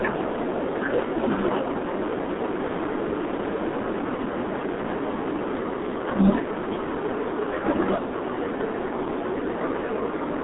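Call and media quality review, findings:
G.723.1 codec, throughout. Muffled, hoarse speech, smeared consonants. Spectrogram: hard ceiling near 3.8 kHz, empty above; energy confined to a 200 Hz to 3.5 kHz telephone band; coarse, blocky formant tracks from 30 ms frames. Heavy damage fits a roughly 6 kbit/s coder.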